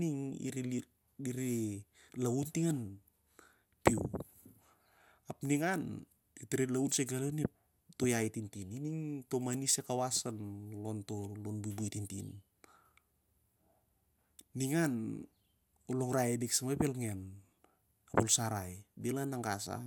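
Nothing in the speech stood out as a technical problem on listening.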